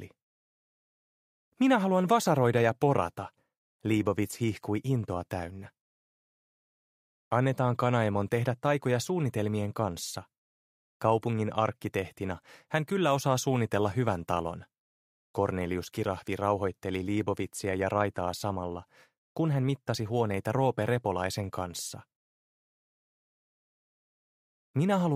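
For about 1.6 seconds, from 14.36 s to 15.97 s, the audio suffers sample clock jitter: the converter's clock wavers by something on the order of a microsecond, so each sample lands slightly off its proper instant. The resulting error is largest where the waveform changes fastest, adding a grainy hiss that sits roughly 45 dB below the signal, swelling on loud, bright passages and dropping away whenever the sound goes quiet.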